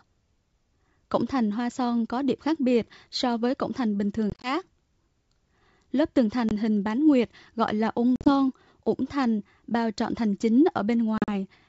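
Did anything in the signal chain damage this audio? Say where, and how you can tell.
Yes, at the network stage: packet loss on an ADPCM call. Hard silent gaps at 4.30–4.49 s after "với cổng thành bình", at 6.49–6.52 s, at 8.16–8.32 s before "ủng thành bao trọn", and at 11.18–11.29 s. Each resumes slightly distorted while the decoder's predictor resynchronises.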